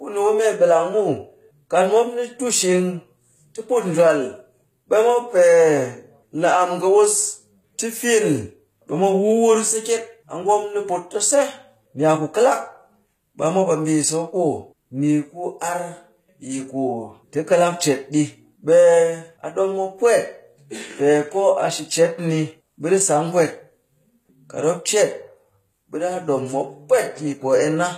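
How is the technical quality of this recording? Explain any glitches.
The recording carries audible codec damage across its entire length, from start to finish. The speech has a treble that sounds synthetic, and nothing is present above about 14.9 kHz. The likely cause is HE-AAC compression at a low rate, one that fits about 20 kbps. At that rate the codec encodes only the lower band and rebuilds the top by copying lower-band content upward under a coarse envelope, so harmonics misalign across the join and sibilants come out gritty and metallic.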